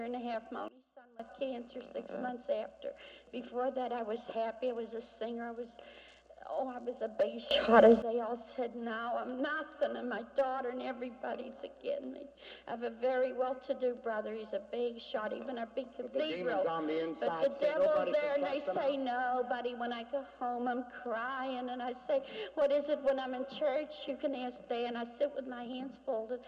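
Sudden gain jumps at 0.68 to 1.20 s (down about 21 dB) and 7.51 to 8.02 s (up about 17 dB): sound and background noise shift level together instantly, likely from unramped digital gain changes.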